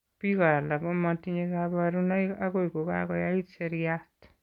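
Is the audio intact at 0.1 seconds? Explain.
Yes, at 0.1 seconds the speech plays through intact, with no dropout, glitch or other fault at that moment.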